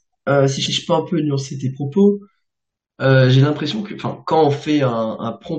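From 0.65 to 0.76 s the speech stutters: a block of about 107 ms is played, then played again once in full, so the clip runs about 107 ms longer. These are repeated frames, where a run of compressed frames, consistent with five frames, was written or sent twice and decoded both times. It differs from an echo or reverb tail because the copy follows the original back to back rather than overlapping it, and nothing is lost, unlike a dropout.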